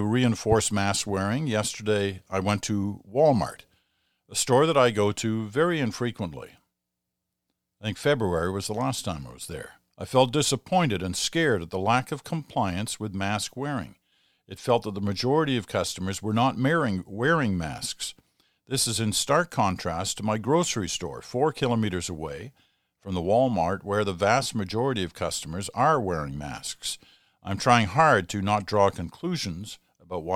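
A loud pop occurs from 0.52 to 0.62 s, just before "mask wearing": two sharp thumps in quick succession, roughly 10 dB above the speech, which continues underneath. The likely cause is a sudden voltage pulse, from a plug, switch or static, entering the signal path.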